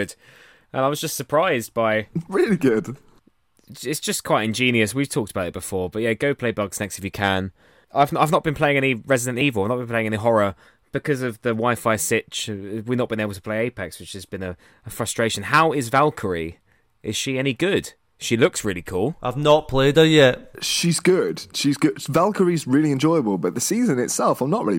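At 9.41 s the speech jumps forward with a short, smeared blip instead of a sharp click. This is compressed frames skipped: about one frame, roughly 30 ms of audio, never played, which fits a 26.1 ms codec frame, with overlapping neighbours blurring the join.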